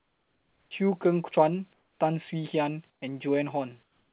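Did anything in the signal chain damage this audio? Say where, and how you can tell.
Yes. In the call processing, the pauses were most likely handled by discontinuous transmission with comfort noise. At 0 to 0.71 s, 1.73 to 2.0 s, 2.9 to 3.02 s and 3.83 s to the end, the real room background, already quiet at about 44 dB below the loudest speech, is replaced by steady, featureless hiss that drops by about 5 to 8 dB. Beneath everything, the narrowband call path cuts all content above 4 kHz.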